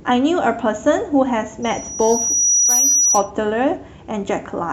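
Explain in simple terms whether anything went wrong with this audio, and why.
Something did go wrong: a loudspeaker feedback squeal runs from 1.62 to 3.31 s. A microphone was picking up the loudspeaker it was feeding, and at one pitch, around 5.8 kHz, the sound kept looping and growing. Over roughly a second it swells from faint to a shrill whistle louder than the speech. That steady build-up is what sets feedback apart from an electrical whine, which stays at one loudness from start to finish.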